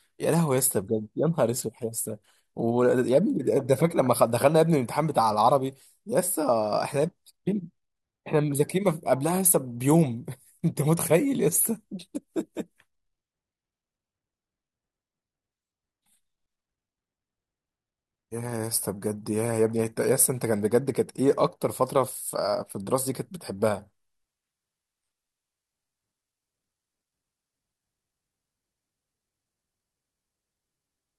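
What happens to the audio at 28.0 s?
At 28.0 s the speech is inside a stretch of adaptive stream at a lower bitrate, running from 23.86 s to the end. The player switched to a leaner version, likely after the connection slowed, so codec artefacts rise suddenly with no gap. A spectrogram shows the high band suddenly becoming smeared and patchy, which fits a drop from roughly 96 to 16 kbit/s.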